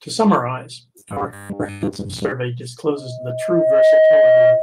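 A speech recording, hit by three faults. From 0.99 to 2.32 s, audio likely stopped arriving often enough, and the playback side covered the gaps by looping a fragment about 10 ms long, throwing away most of the real audio. That fixed loop length stamps a 100 Hz pitch onto the voice, so it turns into a stiff, metallic buzz that only loosely tracks the speech. This is robotic sound from repeated short buffers. Inside that stretch, at 1.71 to 1.82 s, a packet came in late and the jitter buffer ran dry. The receiver held the last sound for 90 ms until the packet turned up, then carried on from the same point. Nothing is lost, but the delay grows by 90 ms and one sound drags on too long with a slight buzz or dip. This is a short stall from a late packet. From 2.96 s to the end at 4.62 s, a microphone is picking up the loudspeaker it feeds, and at 632 Hz the loop gain goes above one. That single tone builds over roughly a second into a squeal about 10 dB above the speech, which is loudspeaker feedback squeal.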